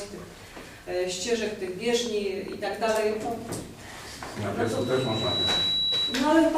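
At 4.64 s a loudspeaker feedback squeal starts, the mic hearing its speaker: a 3.9 kHz tone swells within a second, riding above everything until 6.45 s.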